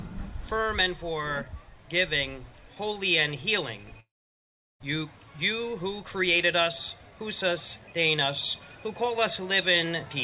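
At 4.0 s the sound breaks off until 4.82 s. The last sound smears into a brief fading buzz or hiss, followed by about 0.73 s of silence. On a spectrogram this shows as a short decaying smear, then an empty column; the waveform goes flat. This is likely a long network dropout: about 0.8 s of audio never arrived, and the receiver extended, faded and then muted the sound before it resumed without the lost portion. Across the whole clip the call path leaves nothing above 4 kHz, consistent with G.711 mu-law at 64 kbps.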